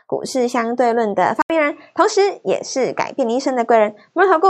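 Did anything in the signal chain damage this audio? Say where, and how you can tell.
Yes. From 1.42 s to the end the speech loses everything above 8 kHz and turns duller, following a gap of 80 ms, with a new, faint noise floor well below the speech and no real change in level. This is likely an input switched to a poorer device at the capture stage, a different microphone or headset profile with narrower bandwidth. The silent gap and changed background separate it from a codec simply lowering its bandwidth.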